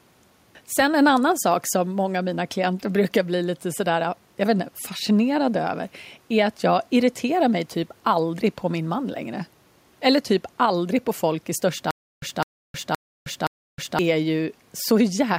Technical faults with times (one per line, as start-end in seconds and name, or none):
11.91-13.99 stutter with silent gaps